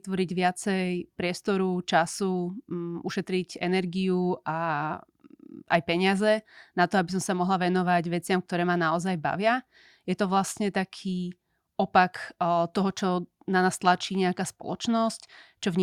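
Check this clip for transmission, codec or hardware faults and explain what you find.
No faults found in the speech; nothing heard calls for comment.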